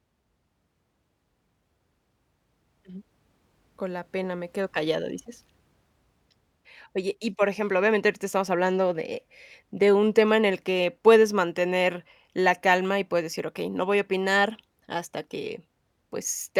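No audible technical faults.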